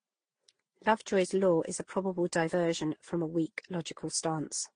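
From start to finish the speech carries stacked codec damage, most likely transcoding between lossy codecs: nothing above 9.8 kHz, with smeared, warbly artefacts from a low-rate Opus-like stage layered under AAC and Vorbis-style ones, each pass re-encoding the last one's mess.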